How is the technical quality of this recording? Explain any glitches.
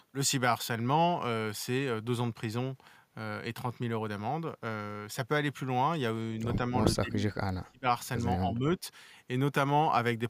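The speech has two stretches of speech suppressed in double talk. From 6.99 to 7.89 s the level falls by up to about 30 dB, and from 8.44 to 8.85 s it dips by around 10 dB. The likely cause is an echo canceller that turned this talker down when it couldn't separate the voice from far-end echo.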